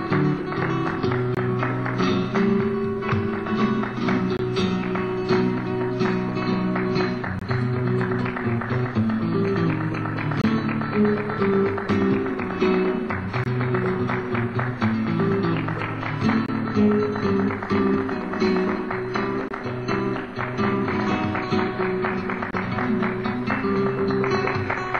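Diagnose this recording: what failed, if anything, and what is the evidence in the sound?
Short holes of about 23 ms interrupt the sound at 1.35, 4.37, 7.39, 10.42, 13.44, 16.46, 19.48 and 22.51 s, about 3.02 s apart. This is a gap between chunks at the storage or playback stage: silence is inserted at each 3-second join.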